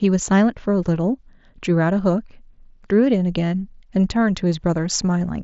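No technical faults present.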